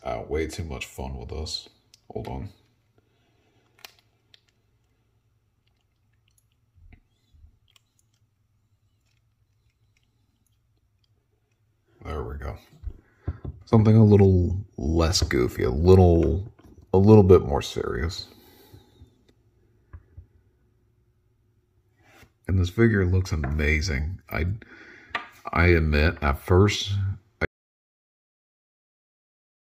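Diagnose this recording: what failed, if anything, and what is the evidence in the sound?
Audio dropout to silence from 27.45 s to the end. Sound cuts to silence, no room tone. Likely a lost input device or link.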